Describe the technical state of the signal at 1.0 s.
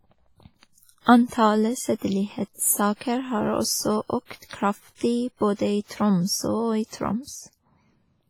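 At 1.0 s the speech carries heavy WMA compression damage, and it runs through the whole clip. The sound is ringing and washy. A hiss rises and falls with the speech. The likely cause is a transform codec that smears quantisation noise across long blocks, tens of milliseconds wide. Weak spectral detail is zeroed out. The depth of the damage fits a low bitrate of around 24 kbps.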